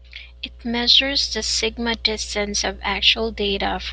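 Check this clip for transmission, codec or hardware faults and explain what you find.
The speech signal arrives intact, with nothing audible to suggest trouble introduced anywhere along the transmission, encoding or hardware chain.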